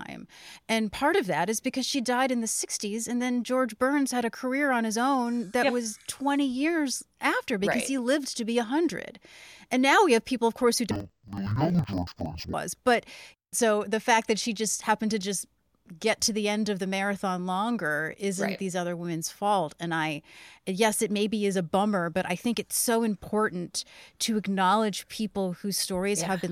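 From 10.91 to 12.55 s, after "people of course who", interleaved audio is read as planar: each block's halves play as separate channels at half speed. The speech drops an octave, doubled and choppy, fluttering at 21.5 Hz, which fits 46 ms, 2048-sample blocks.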